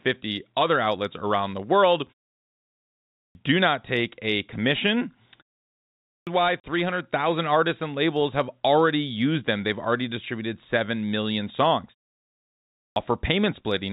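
At 3.06 s the speech has a clipped start after a pause: after about 1 s of silence the output device has gone to sleep, and it takes until 3.35 s, roughly 0.29 s, to wake. The first sounds are swallowed, so the speech starts abruptly. The waveform jumps from flat straight into speech with no onset.

From 4.60 to 7.28 s a loudspeaker feedback squeal builds. The microphone picks up its own loudspeaker, and the loop gain at 5 kHz exceeds one. The tone swells over about two seconds until it is louder than the speech, and it shows on the spectrogram as a single bright horizontal line.

Inside that squeal, at 5.99 s, a second clipped start follows a 0.65 s pause and loses about 0.28 s. Then from 6.60 to 6.64 s there is packet loss filled with silence. The 40 ms hole fits two lost 20 ms packets. It appears as a vertical blank strip with hard-edged boundaries.

At 12.67 s a third clipped start, after a 0.81 s pause, cuts about 0.29 s up to 12.96 s. 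The telephone band keeps the speech energy below 4 kHz.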